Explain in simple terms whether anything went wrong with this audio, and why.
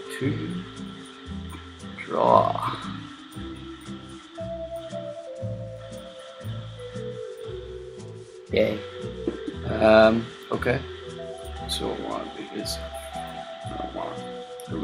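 Nothing went wrong with this audio that a listener can pick out. At no point does anything stand out as a problem, so there is no fault here to name or explain.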